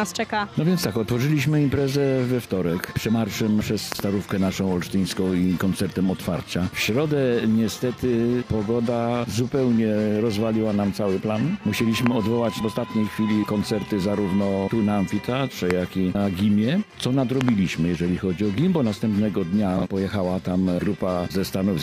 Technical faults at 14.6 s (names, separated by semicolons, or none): none